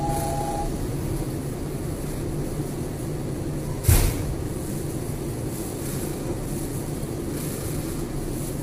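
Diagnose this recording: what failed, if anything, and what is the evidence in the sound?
The codec stage failed, likely through heavy low-delay AAC compression at a rate that fits 24 kbps. Throughout, its short frames blur harmonic detail, so the sound turns rough and grainy with a thinned top band.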